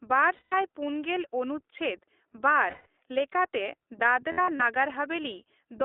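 Speech passed through the iLBC codec, its narrowband coding consistent with the 15.2 kbps mode, so the sound is confined to about 300 Hz to 3.6 kHz and has a plainly rough, synthetic edge. Lost iLBC frames also leave the decoder to repeat the last pitch cycle with added noise, heard as held, buzzy vowels at 0.34–0.54 s and 2.70–2.87 s, and in short broken bursts across 4.32–4.62 s, each recovering almost at once.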